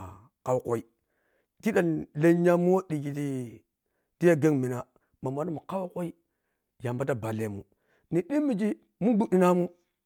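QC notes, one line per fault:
No faults were found in this speech clip. Nothing here needs a fix.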